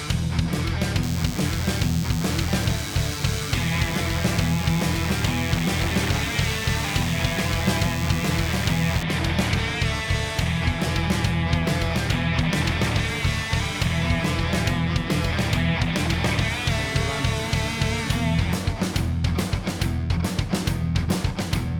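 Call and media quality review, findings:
DECT cordless phone buzz, 1.03 to 9.03 s. Thin, steady buzz at 100 Hz, rich in harmonics, well below the main signal. Probable source: a nearby DECT handset or base. Its radio bursts every 10 ms get rectified in the audio circuit. Buzz stops at 9.03 s.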